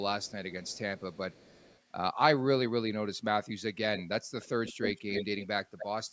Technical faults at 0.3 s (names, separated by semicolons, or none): echo leak